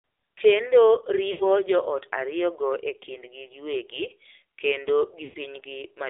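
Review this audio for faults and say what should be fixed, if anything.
The call passed through the AMR narrowband mobile codec at a low mode, which fits roughly 7.4 kbps, with the line limited to about 250 Hz to 3.7 kHz. The speech throughout sounds muffled, buzzy and synthetic. Prevention: carry the call over a wideband or higher-bitrate codec end to end.

Radio errors caused lost AMR speech frames: about 80 ms at 1.32 to 1.48 s, which fits four 20 ms frames, and about 100 ms at 5.24 to 5.37 s, which fits five. The decoder stretches the last good sound, which then fades before the speech returns rough. Prevention: improve radio coverage or enable stronger channel protection and redundancy for the speech frames.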